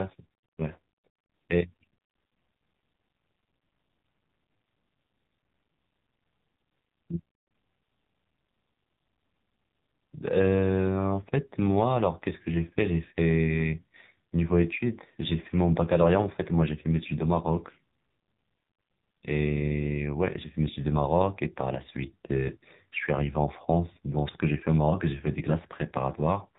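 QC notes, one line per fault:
Throughout: AMR narrowband mobile codec. The speech has the sealed-off sound of a mobile call, with nothing above 4 kHz, which matches 8 kHz sampling. The voice is buzzy and synthetic, which fits the 5.9 kbps AMR-NB mode. At so few bits, the codec's vocal-tract model gets only a handful of excitation pulses for each 5 ms slice. The fine detail of the voice is lost, and heavy coding damage replaces it with a mechanical buzz.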